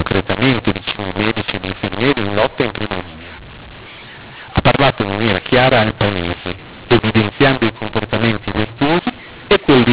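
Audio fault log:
throughout, mu-law and A-law mixed up: A-law telephone coding read back as mu-law scrambles every level, so the speech turns harsh and gritty and pauses fill with hiss. The waveform shows no true silence and distorted peaks. The spectrogram shows broadband noise smeared across gaps, all below 4 kHz.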